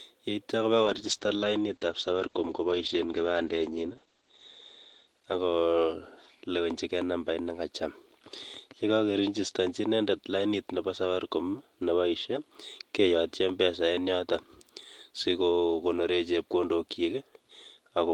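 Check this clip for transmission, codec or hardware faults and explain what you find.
There's one real fault: a call bitrate drop from 0.87 to 7.77 s. The bandwidth estimate fell, so Opus went from 32 to 9 kbps, sitting at the bottom for about 3 s. Coarser coding makes the speech rough and watery, and the band shrinks from 20 kHz to 8 kHz, so it's audibly muffled until the rate climbs back.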